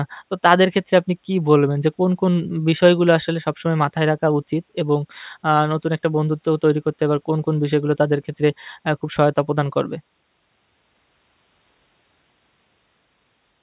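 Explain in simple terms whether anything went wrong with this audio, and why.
Listening closely, nothing in this speech recording stood out as having gone wrong.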